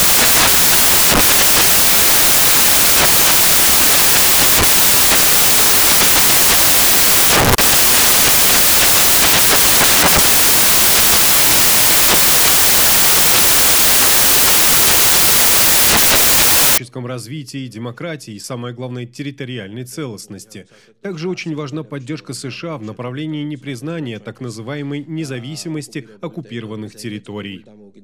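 From the start to 16.78 s, the samples are built from the wrong bytes: the reader assembles each sample with its bytes misaligned or in the wrong order, so the rapidly fluctuating low-order bits land in the most significant position and dominate every value. The result is loud, harsh broadband noise in place of the intended sound, and it stops at 16.78 s.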